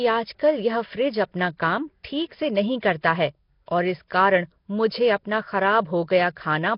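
Speech with Nellymoser compression damage running through the whole clip, likely from a Flash-era Nellymoser Asao microphone codec at a low rate, around 22 kbps. The damage is heavy: the voice carries a rough, hissy halo and a smeared, underwater quality, because the codec spends a fixed, small bit budget per block and replaces bands it cannot afford with noise. Nothing is present above about 5.3 kHz, so sibilance and air are gone.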